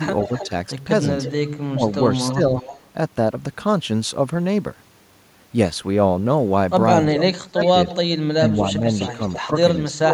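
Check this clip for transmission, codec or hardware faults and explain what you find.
The speech has two faults from the far end's echo handling: leaked echo and suppression of the talker during overlaps.

Echo leak at 0.2–0.49 s, 1.23–2.88 s, 7.63–7.96 s and 9.0–9.76 s. A delayed copy of the speech, lagging by about 0.32 s and sitting roughly 15 dB under it, trails behind. The likely cause is a loudspeaker echo canceller failing to remove everything its microphone caught.

Speech suppressed in double talk at 0.28–0.51 s, 1.7–2.53 s, 7.06–7.62 s and 8.36–10.13 s. The talker's level dips in pieces, slightly at first, then deeply, around 25 dB, near the end. This likely happens because the canceller, unable to separate talker from echo while both sides speak, turns everything down.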